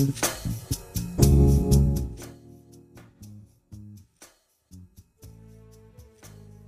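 No technical faults are audible.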